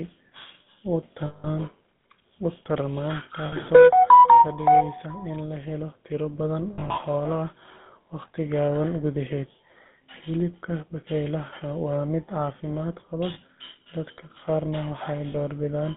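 Speech heard through the GSM full-rate codec, at a rate that fits 13 kbps, confined to roughly 150 Hz to 3.6 kHz. Its pulse-excited vocal-tract model gives the voice a plainly audible buzzy, gravelly roughness. Lost GSM frames occur at 1.26–1.48 s (180 ms), 3.46–3.55 s (60 ms), 6.74–6.98 s (120 ms scattered over about 200 ms, runs of about 40 ms at most), 13.34–13.38 s and 15.32–15.35 s. Each gap is concealed by repeating the last good frame, which produces a short, rough metallic ring.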